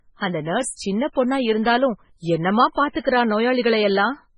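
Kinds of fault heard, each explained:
MP3 compression: The speech runs the whole way through with a watery, swirly quality, as if the quieter detail keeps flickering in and out, and there's nothing at all above about 10.5 kHz, so the top end stops dead. That's most likely a heavily squeezed MP3. Starved of bits, the encoder chops the treble at a fixed point and drops weak frequency components frame by frame. The damage fits a very low bitrate, around 16 kbps.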